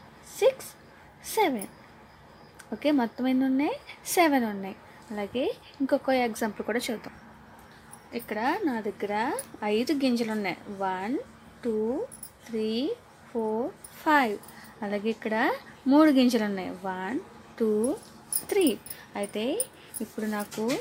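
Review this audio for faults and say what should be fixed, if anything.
A single sharp tick lands at 9.44 s, a bright click spread across the whole spectrum with no relation to the surrounding sound. This is a bit error spike: one sample has jumped to about -20 dBFS and straight back, the kind of leap a flipped bit in memory or on a digital link produces, since the value changes by a power of two. Repair that one sample by interpolation, and use error-checked storage and transfer to prevent it.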